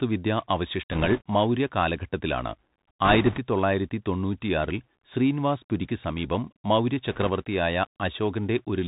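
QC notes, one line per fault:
Throughout, Bluetooth CVSD headset codec. The speech is narrowband, with nothing above 4 kHz. That dull, boxed-in tone fits a 64 kbps CVSD headset link. Each sample is coded as a single up-or-down step whose size adapts. Loud, bright sounds change faster than the steps can follow, so they distort. S sounds come out scratchy. A grainy hiss sits under the speech the whole time. The damage is plainly audible.
0.91–1.21 s, 3.05–3.39 s and 7.11–7.30 s, bit errors on a Bluetooth voice link. In each span a rushing, crackly noise rides over the speech. Bits in the one-bit stream were flipped, around two percent in the first two spans and a little less in the last. Every bit carries the same small weight, and the decoder soon recovers. So there are no sharp clicks, only a brief rough texture.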